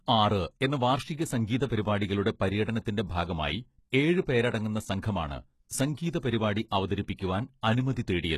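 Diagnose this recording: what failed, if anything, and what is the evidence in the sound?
The codec stage is where this speech went wrong, with what's likely HE-AAC compression running the whole way through. The treble is cut off above 12.3 kHz, and the top that remains is rebuilt from lower bands, so sibilants sound gritty and a bit lispy. That fits a starved bitrate of around 16 kbps.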